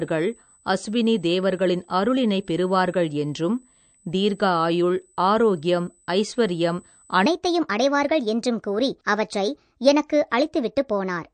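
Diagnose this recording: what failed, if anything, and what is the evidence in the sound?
A steady, fixed-pitch whine sits at 8 kHz for the whole clip, about 35 dB below the speech. This is USB whine, a fault in the analogue wiring and power. Current drawn in the bus's 125-microsecond microframes leaks through the supply or ground and lands exactly on 8 kHz. Mains hum would sit at 50 or 60 Hz with its harmonics, and a converter's idle tone would drift. This one stays locked to the bus rate.

The codec stage shows MP3 compression damage that is plainly audible. Nothing in the signal reaches above 9 kHz, and the speech has a watery, swirling texture, with sibilants turning metallic and chirpy. That pattern fits a low bitrate around 48 kbps. With so few bits, the encoder cuts the treble and drops weak frequency lines frame by frame, and those lines flicker on and off. A simple low-pass filter would also remove the top end, but it would leave the remaining band smooth rather than swirly.

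From 7.26 s to the end of the clip, the speech suddenly runs about 1.26 times fast. Pitch rises by roughly four semitones and the pace hurries along with it. This is a section at the wrong speed. Because pitch and tempo move together, it is a resampling or clock error, not a pitch-shift effect, which would keep the timing intact. The likely cause is that the editing or playback stage fitted that segment to the wrong sample clock.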